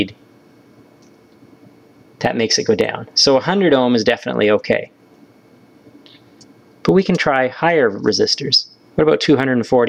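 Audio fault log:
Throughout, gain pumping: the gain swings by around 15 dB. The likely cause is input gain set way too hot for the mic, with a fast limiter or compressor clamping down on each loud sound. That squeezes loud and quiet parts toward the same level, so everything sounds squashed.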